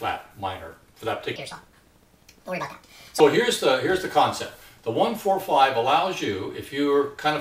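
From 1.36 to 3.20 s, wrong sample rate: audio recorded at 32 kHz plays at 48 kHz, running 1.5 times fast and about 7 semitones higher; spectrogram content shifts upward.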